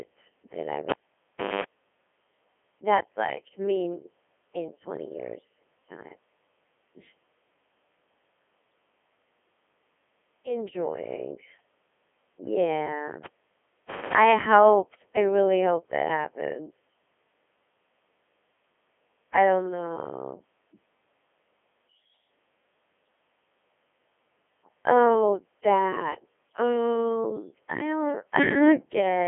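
Throughout, the speech carries Codec 2 vocoder damage, rebuilt from sine waves: robotic, buzzy, confined to 250 Hz to 3.4 kHz, nothing above 3.6 kHz, unlike waveform codecs' swirl; fits 3.2 kbit/s.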